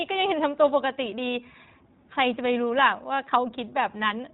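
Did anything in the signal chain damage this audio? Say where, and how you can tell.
Yes. The damage comes from the codec stage, and it runs through the whole speech clip. This is the iLBC codec. Nothing above 4 kHz survives, so the speech sounds narrowband and muffled at the top. It is also plainly rough and synthetic. iLBC codes each frame's excitation on its own, without borrowing from the previous frame. The texture points to 20 ms frames at roughly 15.2 kbps. That low rate leaves coarse, synthetic detail throughout.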